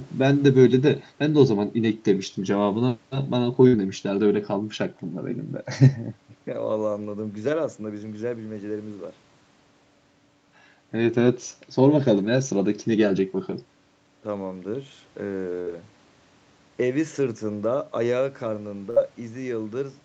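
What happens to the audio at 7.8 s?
Nothing goes wrong at 7.8 s; the speech there is intact and comes through the call path with its top end stopping around 8 kHz.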